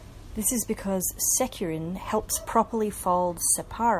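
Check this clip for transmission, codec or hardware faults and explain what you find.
I found no faults in this clip.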